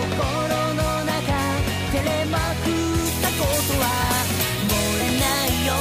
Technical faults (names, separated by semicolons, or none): compressed frames skipped; pre-emphasis left on